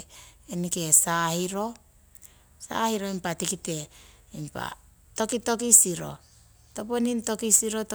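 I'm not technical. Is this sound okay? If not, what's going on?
No. From about 6.06 s to the end of the clip, the speech picks up a fine hiss or grittiness. This is sample clock jitter. The timing signal that tells the equipment when to measure the sound wobbles, by roughly a millionth of a second, so each measurement lands a little early or late. The resulting errors are largest where the sound changes fastest, so the roughness is strongest on loud and sharp sounds and drops away in pauses.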